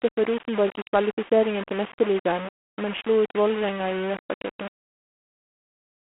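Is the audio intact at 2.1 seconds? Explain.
No. At 2.1 s the speech carries the same damage that runs through the whole clip. The first fault is a coarse, grainy distortion that moves with the voice: quiet syllables turn gritty, and low-level tails drop to silence or sputter between steps. The error sits only about 15 dB below the speech and tracks it rather than forming a steady hiss. This is likely low bit depth without dither, with the signal rounded to very few levels, consistent with a 4-bit quantizer.

The second fault, also present throughout, is G.726 ADPCM coding. The codec sends only a few bits per sample describing how each sample differs from an adaptive prediction. With so few bits, the coarse quantization of that difference becomes a harsh, rasping hiss that rises and falls with the speech level, which points to the 24 kbit/s mode. The sound is confined to a telephone band of roughly 200 Hz to 3.4 kHz, with nothing above 3.8 kHz, so at 2.1 s the voice sounds thin and narrowband as well as rough.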